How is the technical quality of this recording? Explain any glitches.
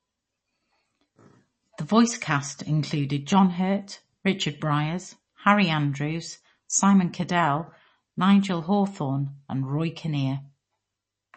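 Quality is poor, with compression damage plainly audible throughout the speech. The likely cause is MP3 compression at roughly 32 kbps, which removes everything above 8.3 kHz and drops weak detail, leaving dull, watery speech.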